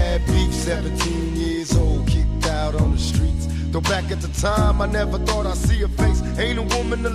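No technical faults can be heard anywhere in the recording.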